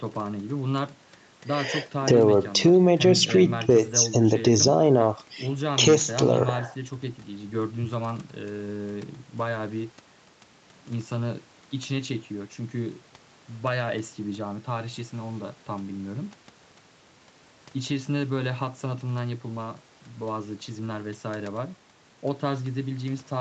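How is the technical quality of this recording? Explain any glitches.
Nothing stood out as a glitch on listening; the speech has the ordinary character of a call, with the sound stopping at about 8 kHz at the top, as the call microphone processing and the Opus codec would give it.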